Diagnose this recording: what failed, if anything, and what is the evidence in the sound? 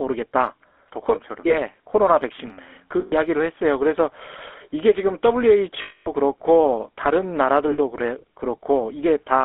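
The codec stage is at fault: the speech has been through the GSM full-rate codec for the whole clip. The encoder models the vocal tract and excites it with sparse, regularly spaced pulses, so every vowel comes out with a buzzy, gravelly grain, and the codec damage is plainly audible. The sound sits in a narrow band of 300 Hz to 3.5 kHz, which fits the 13 kbps full-rate codec on a phone line.

The network also dropped data, leaving lost GSM frames at 1.48 to 1.54 s, 3.0 to 3.14 s, 5.82 to 6.08 s and 7.72 to 7.78 s, covering about 20, 120, 240 and 60 ms of audio. Each time, the decoder reuses the last good frame's settings, so the sound freezes into a rough metallic ring. The 240 ms gap near 6 s rings longest before normal decoding resumes.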